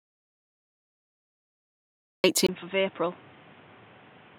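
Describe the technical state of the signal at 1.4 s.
At 1.4 s the signal sits inside an audio dropout to silence running from the clip's start to 2.24 s, likely from a lost input while silence kept being written. It is silence with no room tone: a flat waveform line and an empty, black spectrogram.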